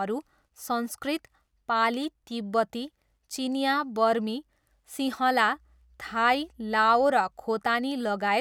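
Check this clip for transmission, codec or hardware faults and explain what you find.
One fault is present: mains hum. It starts at 5.56 s, just after "बर्मी सिँहला", and runs until 7.06 s. A steady low tone at 60 Hz sits under the speech, faint but constant, about 35 dB below it. The hum comes from the power line leaking into the signal path, through a ground loop or a nearby transformer. It gives a dull, even buzz that does not follow the speech at all.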